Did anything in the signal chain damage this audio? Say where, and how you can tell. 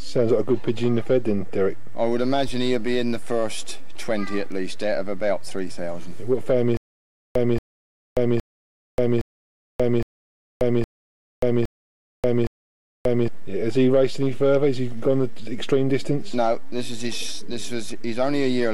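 Yes. From 6.77 to 13.28 s there is a stutter with silent gaps. One 230 ms burst repeats eight times, each followed by 584 ms of digital silence, every 814 ms. This likely stems from a playback or stream stall replaying its last fragment. The intended audio is lost.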